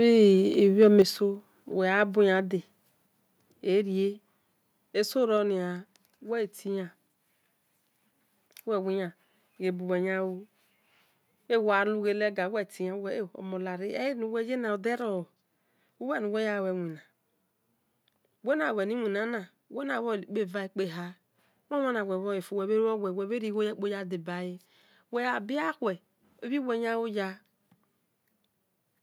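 Right at the start, from 0.81 to 1.01 s, you get microphone overload: the loudest bits of speech go about 1 dB past full scale, so a small fraction of the peaks get their tops sheared flat, giving a short harsh, crackly edge. Likely the input gain was just set too hot for the converter.

Straight after, at 1.02 s, the microphone volume steps down by 6 dB in one jump, so speech and background both drop together. That's likely the call software reacting to the clipping it just saw and cutting the device's input level in one go.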